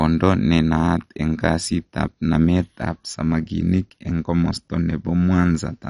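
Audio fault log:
throughout: MP2 compression. The speech was likely squeezed through an MPEG Layer II encoder at a low rate, the kind of damage that fits roughly 48 kbps. Too few bits went round its 32 sub-bands, so the top bands were switched off and nothing survives above 11.3 kHz, leaving the speech dull. The remaining bands are coarsely quantised and flicker in and out, giving a plainly audible gurgling, granular roughness.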